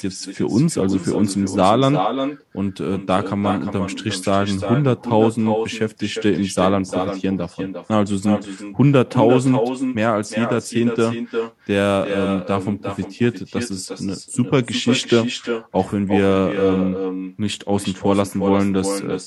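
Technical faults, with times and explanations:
Throughout, echo with no canceller: each phrase returns roughly 400 ms later, about 6 dB quieter and thinner. The far-end loudspeaker leaks into its microphone, and nothing removes it.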